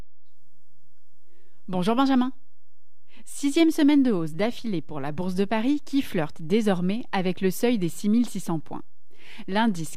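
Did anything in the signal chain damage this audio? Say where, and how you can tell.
Yes. The speech carries a DC offset for its whole length, which points to the analogue input or converter stage. The waveform sits shifted off zero by about -29 dBFS. This cannot be heard directly. It shows as steady energy at 0 Hz and wastes headroom.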